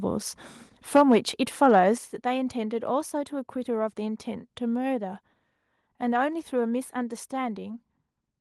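Microphone overload from 0.95 to 1.16 s: peaks push about 6 dB past the converter's ceiling, flattening around one sample in twenty. This is likely an input gain set too high, giving a harsh crackle. A microphone volume step-down lands at 0.97 s, dropping sound and background by about 4 dB, then again at 1.98 s by about 7 dB. The likely cause is the call software cutting input gain in response to the clipping. Through all of this the audio carries a call codec's coding texture, with the top end stopping near 12 kHz, which fits Opus at a modest bitrate.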